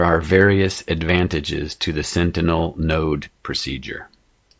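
Nothing in this short bit of speech trips over itself: no dropouts, no glitches, no faults turn up anywhere along the way.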